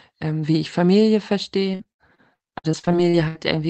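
From 1.71 to 3.37 s, repeated packet loss strikes the speech: fourteen gaps, the longest 77 ms, each patched by stretching the previous sound, so about 30% of that stretch is concealment. The speech turns choppy and robotic, pieces missing, over the call path's 8 kHz band.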